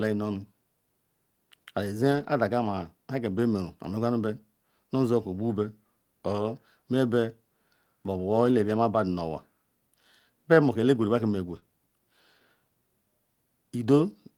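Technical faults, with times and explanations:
2.11–2.29 s, 3.37–3.39 s, 8.45–8.51 s and 11.47–11.57 s, lost packet rebuilt from error correction: each stretch sounds briefly coarse and grainy, with no gap. Packets went missing, but the following packet in each case carried a low-bitrate backup copy that the decoder played in place of the original. The first stretch is the longest, which fits several consecutive packets lost; the one at 3.37 s points to a single packet.
11.59–11.64 s, short concealed packet loss: right after the last rebuilt stretch, about 20 ms of audio arrived too late or not at all, with no backup copy to use. The receiver filled the hole by extending the preceding sound, following its pitch where voiced or using shaped noise otherwise, then crossfaded back into real audio. The result is a short smear or wobble, and a brief consonant there may disappear.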